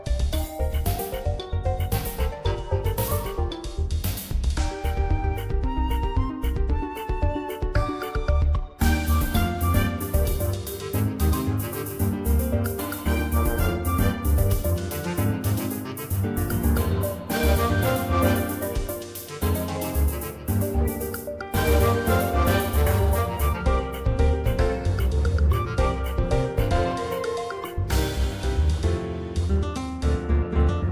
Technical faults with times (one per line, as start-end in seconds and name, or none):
none